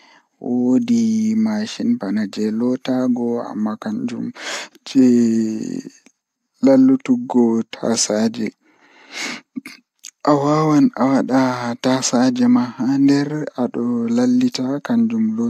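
Nothing in this speech recording stands out as a technical fault, so there's no problem to point to at any moment.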